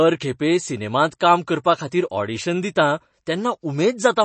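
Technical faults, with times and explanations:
throughout, MP3 compression: the speech sounds watery and swirly, with plainly audible smearing and nothing above 8.3 kHz. The likely cause is MP3 encoding starved of bits, consistent with about 32 kbps, so the encoder cuts the treble and weak frequency lines flicker between frames.
1.19 s, pre-echo: a short hiss of about 13 ms comes just ahead of a sharp attack, which then sounds soft and smeared. The codec spread its quantisation noise across the whole block, so noise meant for the loud onset also filled the quiet moment before it.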